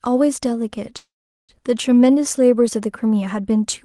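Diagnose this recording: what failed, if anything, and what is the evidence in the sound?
A call audio freeze hits at the network and jitter-buffer stage, 0.97 to 1.52 s. The last sound smears into a fading buzz, then 0.41 s of silence. Speech resumes 0.51 s late with nothing lost, likely because delayed packets drained the buffer. The spectrogram shows a smeared band fading to blank, and the waveform a tapering tail, then flatline.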